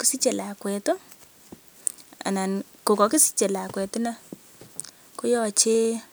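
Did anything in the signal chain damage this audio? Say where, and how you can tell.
Yes. The damage happens at the driver or buffer stage, as periodic USB or driver dropouts. From 3.85 s to 6.05 s the speech carries regular ticks every 0.1 s, about twenty in all. They sound only while signal is present. Each tick is a tiny skip of well under a millisecond, with no silence filling the gap. A background task is stalling the USB bus or audio driver on a fixed cycle, and the stream jumps ahead slightly each time.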